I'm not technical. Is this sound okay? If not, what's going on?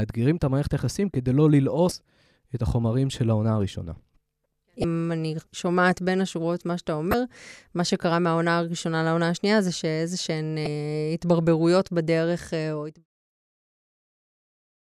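No. The speech has four short glitches from damaged data in a compressed stream, at 1.88–1.92, 4.81–4.84, 7.11–7.14 and 10.63–10.67 s. Corrupted bits make the player lose its place, so it has to hunt for the next piece it can read, unlike a plain click. The gentle fade-out around 12.5–13.07 s is deliberate.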